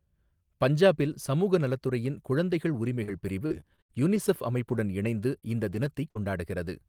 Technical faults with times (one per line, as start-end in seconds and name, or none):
3.03-6.21 repeated packet loss (robotic sound)